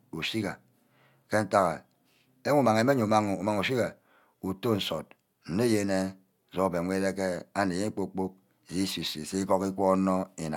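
Across the whole recording the speech signal shows no dropouts, distortion, level jumps or timing disturbances, and nothing in the playback path stands out as a technical problem.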